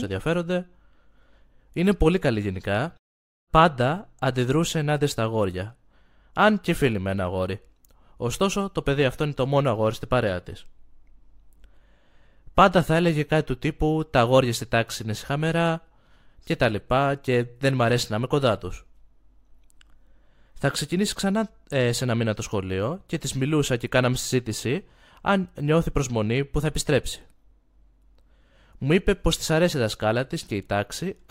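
No technical faults can be heard anywhere in the speech. There is nothing to point to at any moment in the recording.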